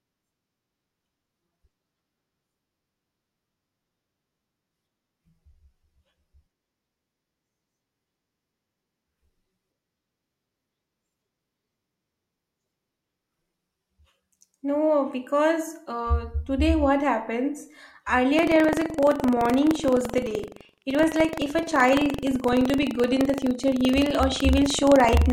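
From 18.35 s right through to the end, the speech picks up a robotic rattle, a buzz at about 23.4 Hz that only shows up while there's signal. That's buffer tearing: the writer and the hardware reader have drifted until they cross inside each period, so a small slice of every buffer replays audio from around 150 ms earlier, with hard joins either side. The buzz rate fits a 2048-sample buffer.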